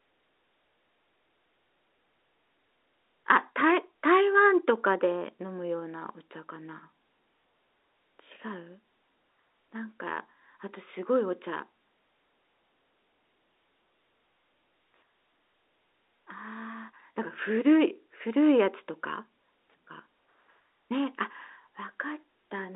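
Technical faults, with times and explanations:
No technical faults are present: the speech arrives over an ordinary G.711 A-law telephone path at 64 kbps, with its band held to about 300 Hz to 3.7 kHz, as a phone line normally does.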